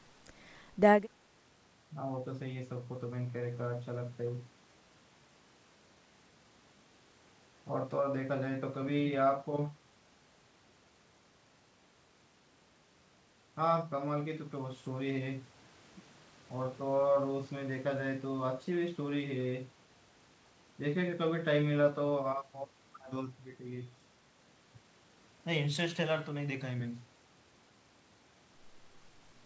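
The speech has no technical faults: its content stops at 8 kHz, as expected from a call's microphone processing followed by a wideband call codec consistent with G.722.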